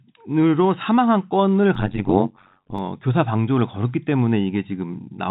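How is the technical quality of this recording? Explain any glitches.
One clear glitch stands out in this telephone-band speech, which has nothing above roughly 4 kHz, consistent with G.711 coding. From 1.75 to 2.79 s there is overlap-add ripple: frames were windowed and rejoined with an overlap that doesn't sum to constant gain, so level swings by about 60 dB around 100 times a second, heard as a metallic buzz with extra tones around the voice.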